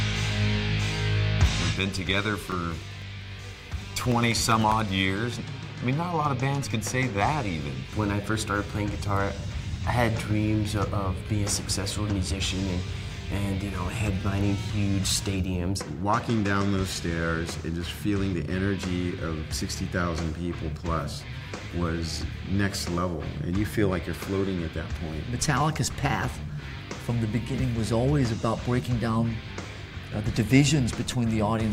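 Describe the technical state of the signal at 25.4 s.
At 25.4 s the signal is intact, with no technical fault present at that moment.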